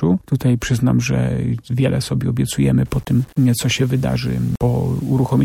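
From about 2.86 s to the end, the sound turns grainy. It's low bit depth without dither, likely a reduction to 7 bits with plain rounding. Because nothing randomises the error, the distortion tracks the signal itself, so quieter passages get gritty and the faintest bits sputter between steps. The resulting noise sits roughly 30 dB below the signal.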